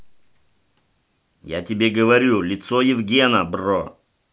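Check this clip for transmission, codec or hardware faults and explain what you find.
Nothing in the speech indicates a transmission, codec or hardware problem.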